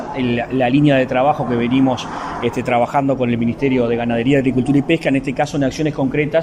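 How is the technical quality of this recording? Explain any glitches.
Nothing in the recording stood out as a technical problem on listening, and no glitches were heard.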